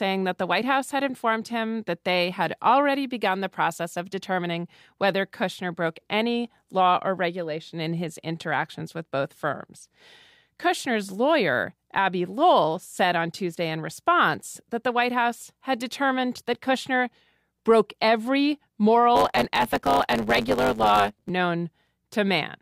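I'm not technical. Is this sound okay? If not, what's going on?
No. From 19.15 to 21.31 s, right after "broke every", the speech picks up a buzz at 100 Hz and runs about 1.09 times too fast. This is a block size mismatch (truncated): one stage hands over longer chunks than the next takes, so each chunk's end gets dropped.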